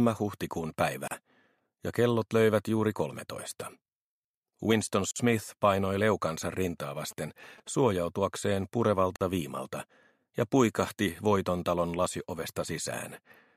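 Right at 1.08 s the sound drops out for about 35 ms, through 1.11 s, then picks up exactly where it left off. That's a gap at a join of encoded pieces: separately encoded chunks were stitched together without trimming the encoder's start-up delay and last-frame padding. The same hole comes back every 4 s, at 5.11 to 5.16 s and later at 9.16 to 9.21 s, both about 49 ms, with edges smeared by the codec.

Between those, from 7.11 to 7.92 s, there's a galloping dit-dit-dit of short buzzes at 217 Hz, sitting well under the main sound, around 25 dB down. Those are GSM signalling bursts. A nearby 2G phone was exchanging its short pre-call or pre-message radio bursts, and the audio circuitry rectified that RF into audible clicks and buzz.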